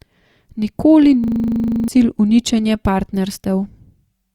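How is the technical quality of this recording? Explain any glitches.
The recording has one clear glitch, a system hang loop from 1.24 to 1.88 s. The system stalled while the sound hardware kept replaying one 40 ms buffer sixteen times, so the speech becomes a rough 25 Hz buzz, and about 0.7 s of audio never arrives.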